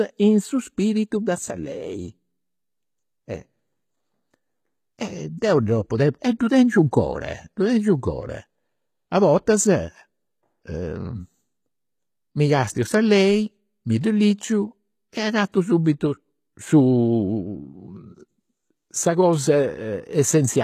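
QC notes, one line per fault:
Throughout, HE-AAC compression, likely at a low bitrate near 20 kbps: the treble is rebuilt from lower bands, so the s sounds turn gritty and lispy, with nothing above 14.9 kHz.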